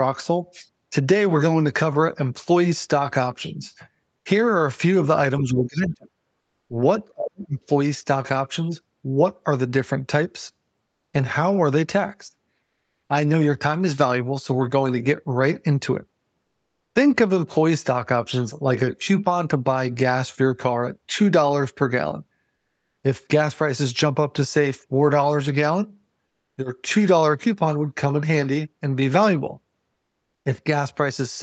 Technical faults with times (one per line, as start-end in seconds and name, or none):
5.41-6.12 speech suppressed in double talk
6.41-6.69 comfort noise in place of the background
7.14-7.57 speech suppressed in double talk
10.85-11.13 comfort noise in place of the background
12.63-13.09 comfort noise in place of the background
22.57-23.03 comfort noise in place of the background
26.27-26.57 comfort noise in place of the background
29.93-30.45 comfort noise in place of the background